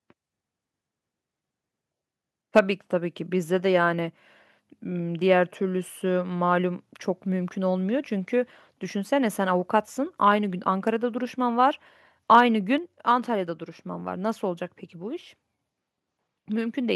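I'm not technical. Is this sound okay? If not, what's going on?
No. Around 2.56 to 2.59 seconds, and again from 12.33 to 12.41 seconds, the loudest moments of the speech turn harsh and crackly. This is likely microphone overload: the microphone was set too sensitive, so the tops of those peaks were cut flat. The first burst is much rougher than the second.

Right after each crackle, at 2.59 and 12.78 seconds, the voice and the background both suddenly get quieter and stay that way. That is likely the microphone volume being stepped down by the call software. Unlike the overload, this adds no roughness.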